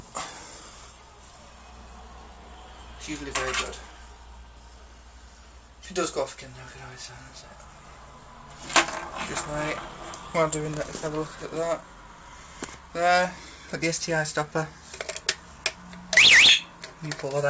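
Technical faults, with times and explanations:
No technical faults are heard in this clip.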